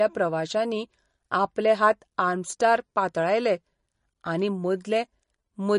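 A speech clip with MP3 compression damage throughout. Nothing is present above 10.6 kHz, so the treble is cut flat. Plainly audible watery, swirly artefacts come from weak frequency lines switching on and off between frames. This likely comes from a low bitrate, around 40 kbps.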